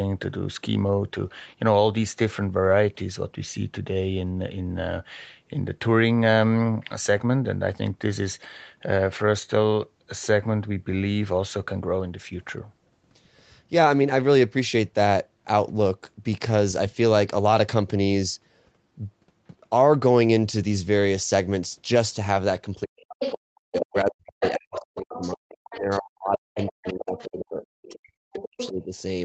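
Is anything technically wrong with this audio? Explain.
Yes, there's some double-talk trouble near the end.

Speech suppressed in double talk, 22.74–27.62 s and 27.96–28.96 s: the talker's voice drops out in chunks, up to around 40 dB, likely because the echo canceller couldn't separate it from the loudspeaker echo.

The other side's voice leaking through at 23.21, 24.41, 25.71, 26.55, 27.62 and 28.4 s: faint-to-fairly-strong scraps of a second voice, likely residual echo the canceller missed.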